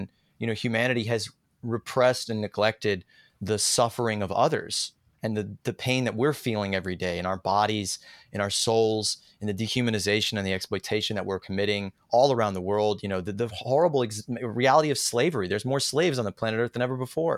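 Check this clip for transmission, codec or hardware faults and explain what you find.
Nothing stood out on listening to the speech here; no transmission, codec or hardware problem could be heard anywhere in it.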